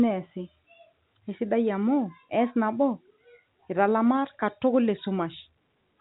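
No faults found in this speech; the 4 kHz band ceiling and faint level-following quantisation hiss are what a normal G.711 A-law telephone path at 64 kbps would give.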